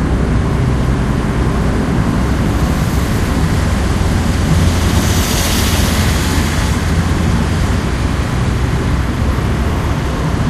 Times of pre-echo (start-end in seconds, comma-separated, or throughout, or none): none